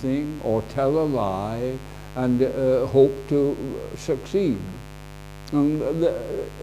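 Mains buzz runs through the entire clip, from the first moment to the last. Something in the signal chain, such as a lamp dimmer, a rectifier or an unshielded cable, is coupling sharp switching spikes into the audio twice per cycle of the 50 Hz supply. Those spikes carry a dense stack of 50 Hz harmonics climbing into the kilohertz range, so the result is a steady, raspy buzz sitting about 15 dB below the wanted sound.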